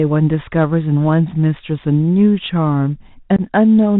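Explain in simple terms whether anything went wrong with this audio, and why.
Yes, two things went wrong. The whole recording went through a Bluetooth CVSD headset codec. That is the old, narrow-band format many headsets use for calls. It keeps nothing above about 4 kHz, so the speech sounds muffled and phone-like. The damage is plainly audible. S sounds come out scratchy, louder high parts break up, and a fine grainy hiss sits under the voice the whole time.

Near the end, from 3.36 to 3.41 s, there is unconcealed Bluetooth headset packet loss. A handful of the tiny audio chunks sent from headset to phone never arrived. About 22 milliseconds of sound is missing. Nothing was done to cover the gap, so you hear a sudden short hole with sharp edges that can click. Just after the gap, the speech comes back quieter for a moment.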